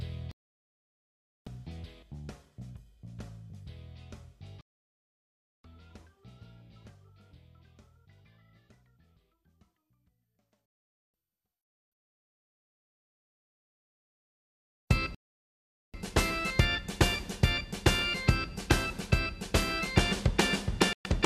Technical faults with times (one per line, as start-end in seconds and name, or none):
0.31-1.47 digital broadcast dropout
4.61-5.65 digital broadcast dropout
10.99 digital broadcast dropout
15.15-15.94 digital broadcast dropout
20.93-21.06 digital broadcast dropout